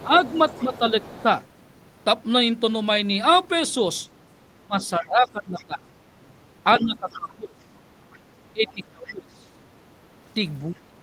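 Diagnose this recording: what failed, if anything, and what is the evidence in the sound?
The fault lies in call processing: the other side's voice is leaking through the talker's uplink. A second, fainter voice sits under the main one from 0.0 to 1.45 s and from 6.74 to 9.11 s at about 20 dB down, and from 4.82 to 5.65 s at about 30 dB down. On a spectrogram it shows as a weak, separate harmonic stack crossing the main speech. The likely cause is the echo canceller failing to remove loudspeaker sound picked up by the microphone.

The same stage also causes speech suppressed in double talk. While both voices overlap, the main speech dips from 0.03 to 1.3 s (about 10 dB at worst, roughly a third of a second in total), from 4.59 to 9.54 s (about 25 dB at worst, around three seconds in total) and from 10.72 to 10.96 s (about 20 dB). The waveform envelope shows sudden notches. The likely mechanism is the canceller's suppressor ducking the near talker along with the echo.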